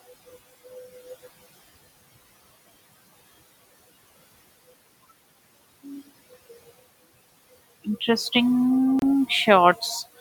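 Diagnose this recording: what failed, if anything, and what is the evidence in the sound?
The wireless playback link stalled: the sound drops out completely from 8.99 to 9.03 s, with a gap of about 28 ms of silence before the speech resumes where it broke off. The likely cause is a Bluetooth stall, in which radio interference held up packets so the headphones' buffer emptied and output paused until the resent data arrived. The room noise, about 21 dB below the speech, vanishes along with the speech during the gap.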